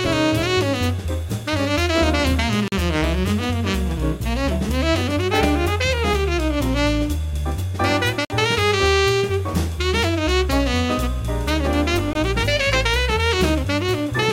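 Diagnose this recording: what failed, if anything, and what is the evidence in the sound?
What failed is the driver or buffer stage: there are three blocks of digital silence, at 2.68 to 2.72 s (40 ms), 8.25 to 8.30 s (about 51 ms) and 12.13 to 12.15 s (20 ms). Each one is a hard drop to silence and back with no fade, so you get a brief hole. That pattern fits the output buffer not getting filled in time, so those stretches went out as zeros.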